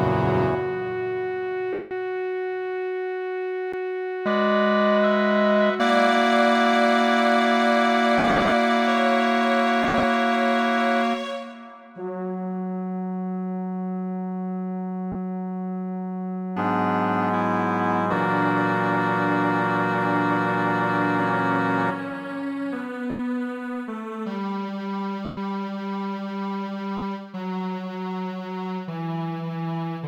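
At 1.73 s the sound smears into a noisy wash for 180 ms: lost LE Audio frames, which the LC3 decoder covers by replaying the last spectrum with scrambled signs. At 3.73 s a brief tick and a jump to another spot mark a CD skip, where the laser leapt to a different turn of the spiral after a mute of about 10 ms. The same LE Audio smear returns in scattered bursts from 8.18 to 8.52 s (210 ms lost, longest gap around 70 ms) and from 9.83 to 10.03 s (110 ms lost), then as single dropouts at 15.12 s (30 ms), 23.10 s (90 ms), 25.25 s (120 ms) and 26.97 s (50 ms).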